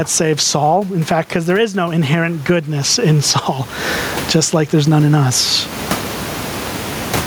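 Gain pumping runs throughout, with the gain swinging by roughly 25 dB under loud speech, likely a fast limiter fighting excessive gain.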